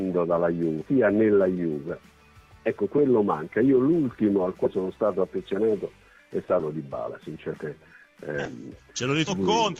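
Compressed frames skipped at 0.81–0.85 s, 4.65–4.68 s, 6.59–6.61 s, 7.53 s, 8.45–8.50 s and 9.27–9.32 s. Runs of whole frames never reach playback, so the audio jumps ahead by roughly 150 to 500 ms at each point, in steps that fit 20 ms frames.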